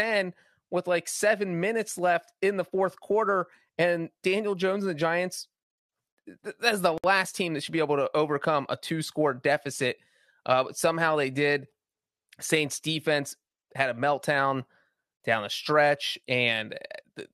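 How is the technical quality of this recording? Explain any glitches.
The recording has one clear glitch, a gap at a join of encoded pieces. At 6.98 s, between "that is the" and "team that should be", the speech drops out for about 60 ms with smeared edges, then resumes where it stopped. Separately encoded pieces, apparently about 10 seconds long, were joined without trimming the encoder's start delay and final-frame padding.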